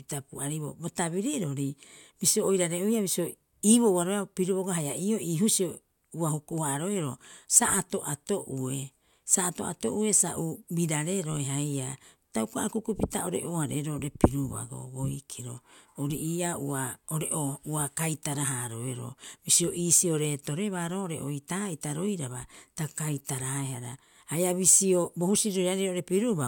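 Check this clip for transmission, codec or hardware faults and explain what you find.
Listening through the speech, I find nothing attributable to the transmission path, a codec or the hardware.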